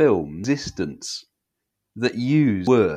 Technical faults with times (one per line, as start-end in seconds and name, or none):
0.44 damaged data in a compressed stream
2.67 damaged data in a compressed stream